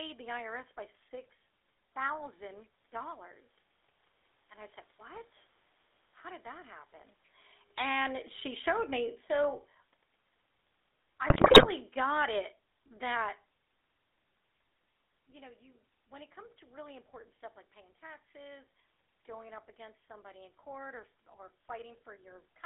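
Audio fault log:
Throughout: GSM full-rate codec. The speech is plainly audible as GSM full-rate coding, which fits a 13 kbps bitrate. The codec rebuilds the voice from a vocal-tract filter driven by a sparse, regularly spaced pulse excitation, which gives it a buzzy, gravelly roughness. The line band runs from about 300 Hz to 3.7 kHz, so a spectrogram shows the energy confined to that strip, with a hard ceiling near 3.7 kHz and empty space above it.
7.62–13.33 s: automatic gain falling. Just after "did that happen", the automatic gain control judged the input too loud or its background too strong and pulled its gain down by about 10 dB over these several seconds. Speech and room noise sink together, so the level drop is not the talker's doing. On the waveform, the envelope tapers steadily across the span, and the noise floor between phrases shrinks with it rather than staying put.
11.30–11.69 s: GSM bit errors. 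For roughly 0.39 s, corrupted bits reached the speech decoder, and the voice breaks into squawks, pops and gargling. Wrong filter, pitch or gain values bend the spectrum and throw the level around frame by frame, which fits about 17 damaged frames. On a spectrogram this looks like a short run of blocky, smeared columns with misplaced formant bands, and the waveform shows abrupt jumps in amplitude while the bad patch lasts.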